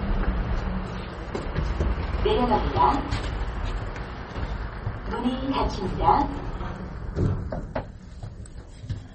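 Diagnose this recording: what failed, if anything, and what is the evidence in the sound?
The codec stage is where this failed, likely MP3 compression run at a starved bitrate. Across the whole recording nothing survives above 8.4 kHz, a hard treble ceiling that fits an encoder at around 32 kbps. Below that ceiling the damage is plainly audible. Weak frequency components drop in and out from frame to frame, so the sound turns watery and swirly, and sharp attacks lose their edges and smear.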